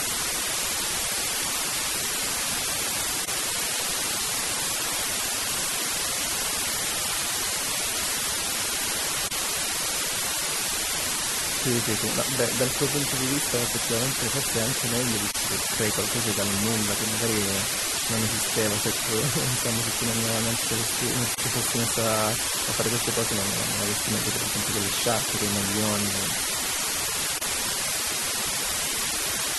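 From the first moment to the end, a constant, even hiss sits only a little below the speech, with no harsh distortion. This is low bit depth with dither: the audio appears reduced to about 3 bits, and dither turns the coarse rounding error into steady white noise.

Throughout, the speech also has a plainly audible watery, swirling texture and dulled edges. This is likely MP3 compression, and the amount of damage fits a low bitrate of about 64 kbps. Short of bits, the encoder discards detail it judges less important.

Brief silences break the continuous sound at 3.25, 9.28, 15.31, 21.35 and 27.38 s, one every 6 s. The first lasts about 29 ms and the others about 34 ms, and each has smeared edges. After each silence the speech resumes where it stopped. This is a gap at a join of encoded pieces. Segments were encoded separately and joined without trimming, so each encoder's start-up delay and final-frame padding stayed in as silence.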